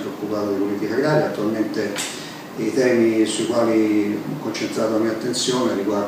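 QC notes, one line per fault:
No faults found on this pass; nothing to log.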